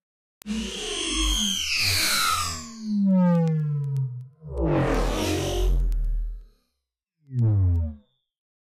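From 0.18 s to 8.62 s there are word clock ticks, roughly ten a second, as an unlocked receiver drifts around 150 ppm and slips single samples.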